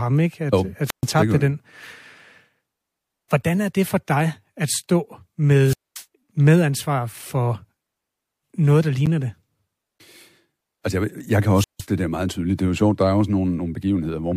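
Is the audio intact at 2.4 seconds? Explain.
Yes, at 2.4 s the speech runs on without any audible fault.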